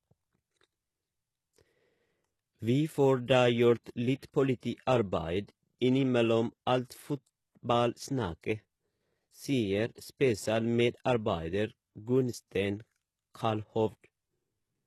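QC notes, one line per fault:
Throughout, HE-AAC compression: plainly audible damage, with gritty, lispy s sounds and nothing above 12.3 kHz. Likely a very low-bitrate encode, around 16 kbps, faking treble from copied lower bands.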